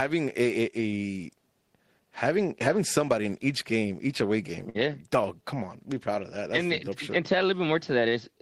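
Right after "game each away game", at about 4.69 to 4.77 s, there's a short stall from a late packet. The jitter buffer ran dry, so the last sound got stretched for about 53 ms with a faint buzz or dip, then playback picked up where it left off, nothing lost, just 53 ms later.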